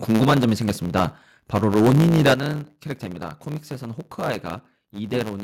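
Throughout the speech runs a steady 109 Hz buzz, and the pace is 1.09 times normal while the timbre stays. This is a block size mismatch (truncated): one stage writes longer blocks than the next reads, so each block's tail is discarded, producing a buzz at the block rate.

From 0.11 to 0.53 s the loudest syllables take on a harsh, crackling edge, with peaks about 6 dB beyond the limit and a few percent of samples flattened. That fits microphone overload, likely from input gain set too high for the converter. At 0.24 s, voice and background drop together by about 4 dB in one step, a microphone volume step-down, likely as the software cuts input gain. Shorter, milder clipping follows at 0.95 to 1.03 s, about 2 dB over. Heavier crackle runs from 1.56 to 2.34 s, about 7 dB over, with several percent of samples cut. At 2.34 s the level steps down again, by about 9 dB.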